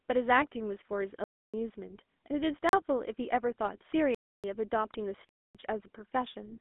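Throughout, the speech has passed through the GSM full-rate codec at 13 kbps. It models the vocal tract and drives it with coarse, sparsely sampled pulse excitation, so the voice takes on a plainly audible buzzy, gravelly roughness, and the band is narrowed to about 250 Hz to 3.5 kHz.

Four times, a block of samples was replaced by zeros, producing blocks of digital silence: 1.24 to 1.54 s, 2.69 to 2.73 s, 4.15 to 4.44 s and 5.29 to 5.55 s. Each cuts abruptly to dead silence and back without fades. The 39 ms gap is a brief hole, and the others are clear dropouts of roughly a quarter to a third of a second.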